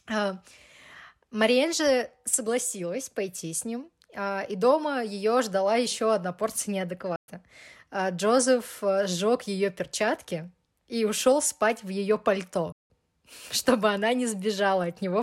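The speech drops to silence twice, at 7.16 s after "ждала еще одна порция" for 120 ms and at 12.72 s after "ушел спать в ее" for 176 ms. Each time it resumes where it stopped, consistent with a playback stall, likely from the player running short of data.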